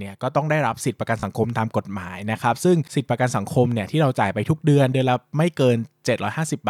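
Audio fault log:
1.20–1.23 s, Bluetooth stutter: about 29 ms of the speech is lost, which fits two lost packets. The receiver repeats its last slice briefly, then resumes later.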